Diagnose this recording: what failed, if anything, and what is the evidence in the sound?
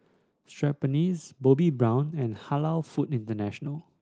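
Nothing failed in this recording, and the sound gives no evidence of any fault.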